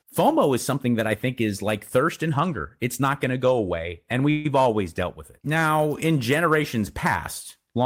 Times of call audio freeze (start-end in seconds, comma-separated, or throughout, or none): 4.30-4.46